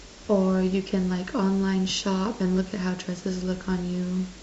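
No audible faults anywhere in the speech recording.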